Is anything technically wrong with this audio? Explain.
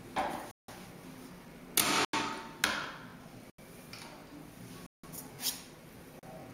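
Yes. There are five blocks of digital silence, at 0.51–0.68 s (about 170 ms), 2.05–2.13 s (85 ms), 3.50–3.58 s (85 ms), 4.86–5.04 s (170 ms) and 6.19–6.23 s (38 ms). In each, the sound drops abruptly to silence and snaps back without a fade, so each is heard as a short hole. The first four lengths fit whole 4096- and 8192-sample blocks at 48 kHz, pointing to output buffers left unfilled in time. On the waveform each gap is a dead-flat line, and on the spectrogram a blank vertical band.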